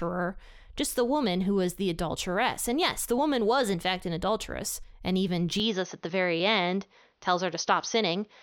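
At 5.6 s, right after "an adulteress and even", the speech turns duller for the rest of the clip, with no gap, a similar level and a faint new background noise. This likely means the input switched to a poorer device, which a simple filter wouldn't explain because of the new noise floor.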